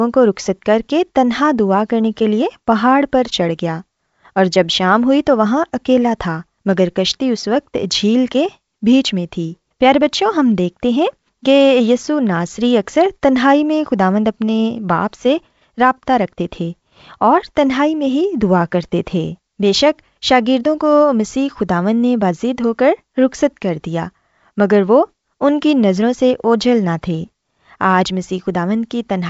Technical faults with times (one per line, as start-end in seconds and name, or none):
none